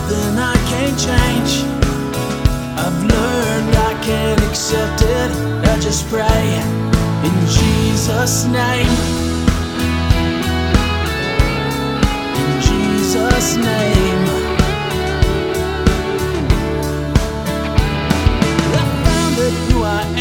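Nothing stood out on listening; no audible problem turned up anywhere in the recording.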